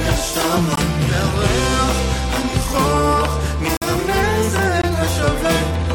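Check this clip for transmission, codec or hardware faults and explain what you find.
Three short dropouts are present, all caused by a gap between stream segments. They fall at 0.76 to 0.78 s, 3.77 to 3.82 s and 4.82 to 4.84 s, and their spacing fits 1.0 s segments. Where the time stamps of adjacent segments fail to meet, the player pads the difference with silence. This inserts about 18 ms, 49 ms and 19 ms respectively. Each is heard as a hard-edged hole in the sound, the middle one noticeably longer. No audio is lost; it is only delayed.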